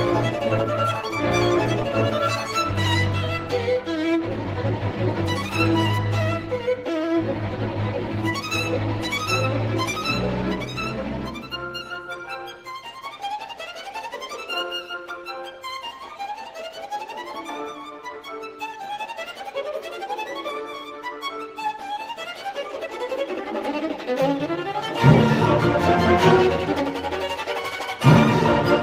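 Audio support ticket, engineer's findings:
Nothing stood out on listening; no findings to log against this audio.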